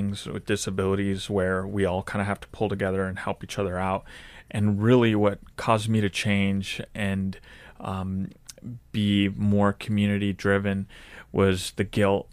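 No technical faults are audible.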